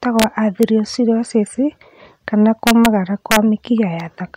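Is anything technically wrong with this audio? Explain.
Yes. Integer overflow at 0.20 to 0.24 s, 0.63 s, 2.67 to 2.86 s and 3.31 to 3.36 s: speech peaks up to about 3 dB past the limit wrap to the opposite sign, producing violent cracks.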